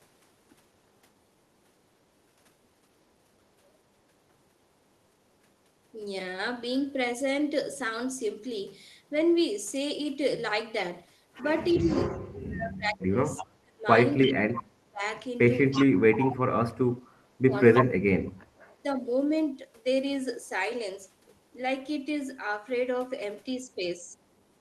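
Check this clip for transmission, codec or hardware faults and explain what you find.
Two related faults affect the stretch from about 11.7 to 19.1 s of this speech clip. Both likely come from an echo canceller struggling with loudspeaker pickup.

Echo leak: the canceller likely failed to remove everything its microphone picked up from the loudspeaker, so a copy was sent back. Short delayed scraps, trailing the speech by 322 ms, appear at 11.73–11.95, 13.36–13.45, 15.71–15.85 and 17.75–17.85 s. They grow from faint to nearly as loud as the speech.

Speech suppressed in double talk: when both sides spoke at once, the canceller likely could not separate its talker from the echo and turned both down. The speech dips or drops out at 11.74–13.86, 14.22–15.03, 15.76–18.42 and 18.82–19.09 s. It falls by up to roughly 30 to 35 dB, with the last dip only slight.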